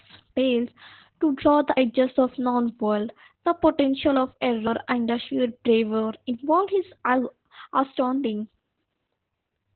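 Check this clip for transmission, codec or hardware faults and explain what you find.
Two kinds of fault are present in this speech: heavy low-bitrate voice compression throughout, and two short skips where audio drops out.

Opus voice compression runs the whole length at about 8 kbps in SILK narrowband mode, coarsely modelling the excitation in 20 ms frames. The speech sounds muffled, hoarse and slightly robotic. On a spectrogram, energy stops sharply near 4 kHz, with smeared harmonics below.

Audio missing between chunks occurs at 1.77 s and 4.67 s, each removing roughly a tenth of a second. The likely cause is a recorder processing 3-second blocks and losing material at each handover. Each sounds like an abrupt skip. The waveform shows a hard splice with no silent gap.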